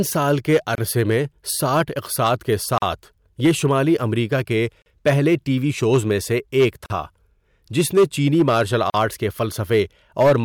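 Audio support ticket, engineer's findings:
Hard clipping throughout the speech: peaks driven about 8 dB past full scale, roughly one and a half percent of samples flat-topped. Waveform shows squared crests; spectrogram shows harmonic smear high up.

Gap at a join of encoded pieces: silences at 0.75, 2.78, 4.82, 6.86 and 8.90 s, about 40 ms each (first 29 ms, after "سال کے"), spaced 2.0 s apart. Encoder delay and padding were left in at the joins. These show as narrow vertical strips with smeared edges.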